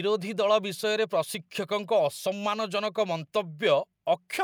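No technical faults are audible anywhere in the speech.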